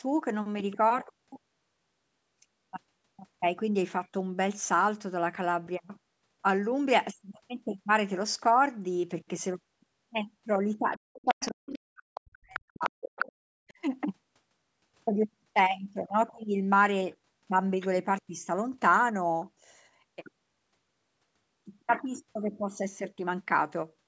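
Between 10.98 and 13.24 s the talker's speech sinks and breaks into pieces, with the deepest dips falling by something like 40 dB and around two seconds affected in total, followed by a second brief drop from 13.47 to 13.64 s. This is speech suppressed in double talk: both ends were likely talking at once, and the echo canceller, unable to tell the local talker apart from the loudspeaker's echo, pulled the whole signal down together. In the same stretch the other side's voice leaks through in short scraps at 11.26–11.52, 12.14–12.21, 12.54–12.60, 12.84–12.89, 13.19–13.32 and 13.68–13.73 s. Most sit well below the main speech, while the one around 13.2 s is nearly as loud and the last is barely there. The likely cause is the far-end voice playing on the talker's loudspeaker and reaching the microphone, with the echo canceller failing to remove all of it. The call's microphone processing caps the audio at about 8 kHz.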